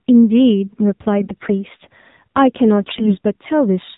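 Throughout, the speech sounds buzzy and somewhat synthetic, with everything above 4 kHz missing, so sibilants lose their edge and the voice sounds boxed in. This is the AMR narrowband mobile codec. It samples at 8 kHz and rebuilds the voice from a vocal-tract model excited by sparse pulses. The clearly audible coarseness fits a low mode of around 7.4 kbps, where too few pulses are available to carry natural texture.

From 1.19 to 1.51 s, and again from 2.81 to 3.17 s, the voice keeps its pitch and loudness but turns hoarse, scratchy and gargly. These are AMR bit errors. Bits in the weakly protected part of each frame arrived corrupted while the core checksum still passed. The excitation pulses were placed wrongly and the fine gain and spectral values were skewed. The second burst is harsher, consistent with an error rate near 10 percent against about 7 percent in the first.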